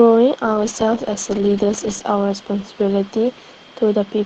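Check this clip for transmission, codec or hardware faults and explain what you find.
One transmission fault appears in this speech. A call bitrate drop runs from 0.46 s to the end. The call's bandwidth estimate fell, so the Opus encoder in the call path had far fewer bits and coded more coarsely. The sound fits a fall from 32 kbps to around 11 kbps, holding at its lowest for 1.76 s. Speech turns rough and watery, and the upper range thins below the path's normal 8 kHz ceiling.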